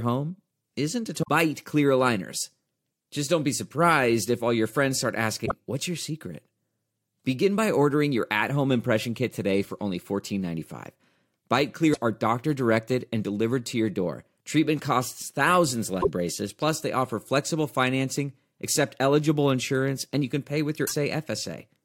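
Speech with damaged data in a compressed stream, heard as five brief glitches at 1.19–1.29 s, 5.42–5.52 s, 11.90–11.97 s, 15.98–16.07 s and 20.83–20.92 s, each lasting under a tenth of a second. Corrupted bytes make the decoder misread those frames and lose sync until it finds a valid header. A spectrogram shows sudden blocky, broadband smears that break the harmonic pattern, and the waveform shows matching abrupt bursts.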